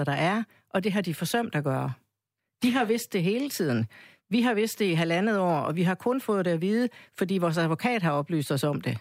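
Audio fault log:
No faults heard anywhere in this speech recording.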